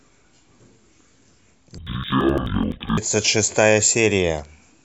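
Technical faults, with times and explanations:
1.78 to 3.02 s, interleaved audio read as planar: the speech drops an octave, doubled and choppy. Each block of about 85 ms, which fits a 4096-sample buffer, is split into halves played at half speed. This chops the sound at about 11.7 Hz.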